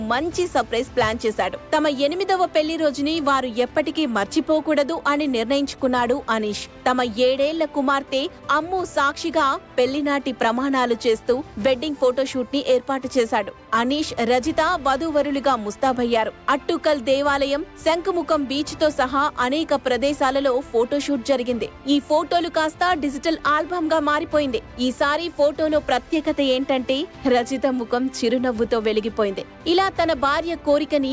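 No technical faults can be heard anywhere in the recording.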